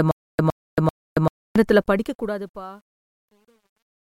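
A speech clip opens on a stutter with silent gaps, already under way at 0 s and lasting until 1.56 s. A 112 ms fragment repeats three times, with 277 ms of digital silence between, likely from a stalled stream. As the fade-out runs from 1.68 s to 4.2 s, truncation distortion appears from 1.68 s. The fade keeps only 11 bits without dither, turning gritty from 2.62 s onward.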